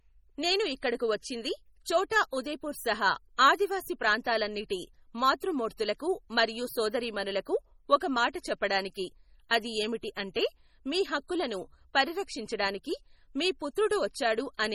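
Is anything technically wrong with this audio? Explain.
Yes, there are two faults.

MP3 compression runs through the whole clip and is the likely cause of the heavy codec damage. The encoder has too few bits, so it zeroes weaker frequency lines, which flicker on and off from frame to frame. That gives the speech a watery, swirling texture, with metallic chirps on s sounds and smeared consonant onsets. The degree of damage fits a low rate of around 32 kbps. Nothing is present above 19.5 kHz.

Pre-echo occurs at 2.10 s. A transform codec spreads its quantisation noise evenly across each block. Here a sharp attack falls late in a block, so noise scaled to the loud onset also fills the quiet moment before it, about 15 ms ahead. A brief hiss precedes the attack, and the onset itself sounds soft and blurred rather than crisp.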